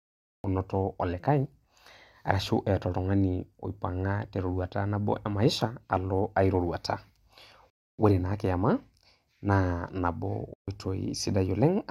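The clip opens with a cut-off start: digital silence runs from 0.0 to 0.44 s, and then the speech appears abruptly, already in progress. Because capture began late, the first sound arrives at full level with no natural attack or fade-in. That distinguishes it from a gentle gain ramp or a quiet lead-in, where the level would build gradually and the onset of the sound would be intact.

Later come two gaps of complete silence, at 7.70 s lasting 285 ms and at 10.54 s lasting 141 ms. Both are likely a Bluetooth stall. Radio interference delayed packets, the headphones' buffer emptied, and playback simply halted until the data caught up. What separates this from codec packet-loss concealment is the silence itself. Concealment fills a gap with smeared, buzzy or repeated fragments, whereas here the audio stops cleanly and then resumes.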